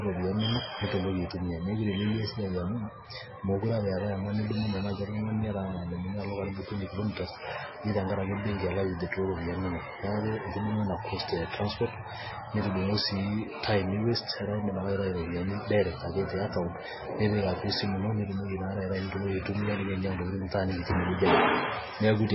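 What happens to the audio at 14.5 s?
At 14.5 s the speech has the same damage heard through the whole clip. Nothing sounds above 5.6 kHz, so it is dull and muffled. It has a watery, swirling texture. This is likely MP3 compression at a very low bitrate, near 16 kbps.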